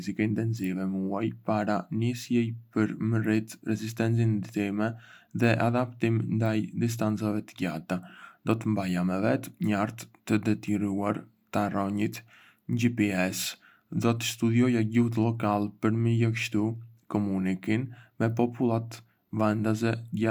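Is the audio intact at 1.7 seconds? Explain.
Yes, the speech at 1.7 seconds plays through intact, with no dropout, click, distortion or other disturbance at that moment.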